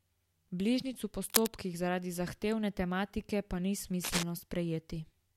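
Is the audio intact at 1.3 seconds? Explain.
No. From 1.24 to 1.47 s, just before "zaradi zahtevne tematike", cable scratch noise rasps over the speech at roughly its own loudness, likely from a worn cable or connector shifting and rapidly changing contact resistance. Its dense, uneven rustle sets it apart from isolated clicks or crackle.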